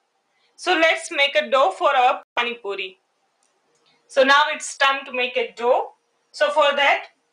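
At 2.23 s the wireless link likely suffered a Bluetooth stall: packets were held up, the receiving buffer ran empty, and playback waited for the resent data. The sound drops to silence for about 134 ms, resuming by 2.38 s.

Between 3.41 and 4.11 s, the noise suppressor misjudged part of the signal as noise and pulled it down more than the rest, producing sound cut by the noise suppressor. Across roughly 0.4 s of that span, the level sinks, by about 18 dB at its deepest.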